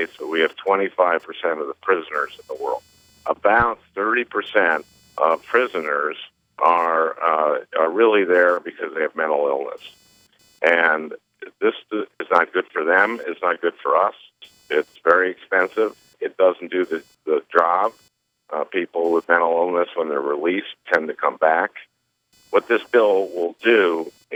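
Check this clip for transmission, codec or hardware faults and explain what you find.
One hardware fault runs through the whole clip: computer activity noise. The audio circuit shares its ground with a computer whose changing processor or graphics load shifts that ground. This leaves a faint buzz pulsing around 500 times a second, roughly 40 dB below the wanted sound, rising and falling with the machine's workload rather than with the audio.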